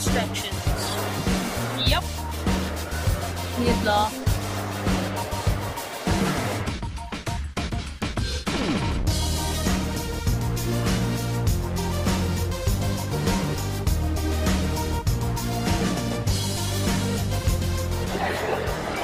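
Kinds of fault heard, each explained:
No technical faults can be heard anywhere in the recording, so there is nothing to list by kind.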